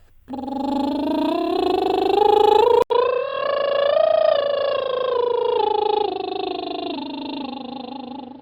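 Music, with an abrupt change at 2.82 s. After an 80 ms gap, the sound turns dull and boxy to the end, with nothing above 5.3 kHz, about 5 dB quieter, and with new background noise about 35 dB below the music. The input likely switched to a poorer device.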